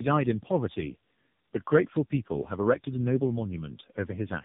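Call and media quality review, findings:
Tandem speech coding, whole clip: rough, muffled, warbly speech. Sound fits three speech codecs in series, ending at AMR-NB near 8 kbit/s; each re-encodes the previous decoder's damage. Spectrogram: hard ceiling at 3.7 kHz, smeared, unsteady harmonics.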